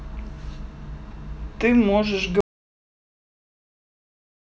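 It's a short speech clip, and the problem is an audio dropout to silence starting at about 2.41 s and running all the way to the end, so roughly the last 2 seconds are just gone. The sound cuts off mid-flow and what's left is silence, no room tone at all. That points to the input likely being lost, through a disconnected device, a failed link or a mute, while the recorder kept writing silence.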